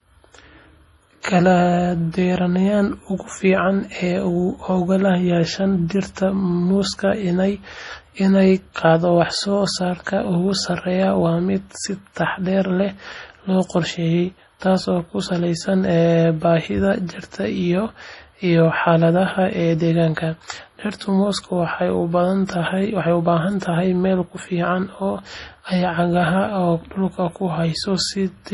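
From start to finish the speech carries what sounds like heavy MP3 compression: nothing above about 11.3 kHz, and a watery, swirly texture as weak frequency lines drop in and out between frames, which fits a bitrate around 32 kbps. That's the likely cause.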